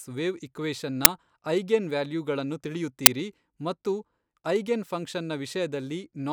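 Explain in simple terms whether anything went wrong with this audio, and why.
Yes, something went wrong: brief, loud cracks at 1.05 s and 3.06 s are an uninitialised buffer, where leftover memory was played as sound instead of the speech.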